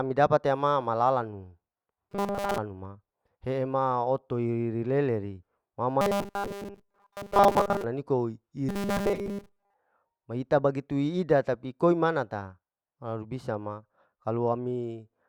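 From 2.09 to 2.58 s, again from 6.01 to 7.84 s, and from 8.69 to 9.74 s, the speech takes on a robotic sound from repeated short buffers: a rigid, metallic 200 Hz buzz that still loosely tracks the words. This is likely caused by a 5 ms slice being replayed while most of the real audio is skipped. A spectrogram shows evenly spaced horizontal bands at 200 Hz multiples; the waveform shows identical 5 ms cycles.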